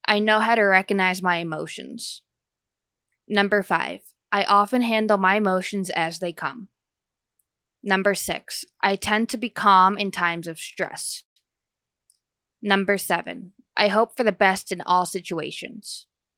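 A short stall from a late packet occurs at 10.73 to 10.78 s, just after "calm in times of". A packet missed its playout time and the jitter buffer emptied, so the receiver stretched the last sound by 28 ms until the data arrived. Nothing is lost; the sound is briefly held too long.

A call audio freeze follows at 11.20 to 11.38 s, still shortly after "calm in times of". The most likely cause is packets held up in transit that drained the jitter buffer. The receiver extended the last sound for 159 ms, 120 ms of it silent, then resumed where it stopped, inserting a gap without dropping audio.

A jitter buffer speed-up runs from 14.21 to 16.36 s, beginning after "seven I hope for". With more audio queued than its target, the receiver repeatedly cut out pitch-period-sized slices, about a tenth of a second in all. Playback runs at 104% speed with unchanged pitch.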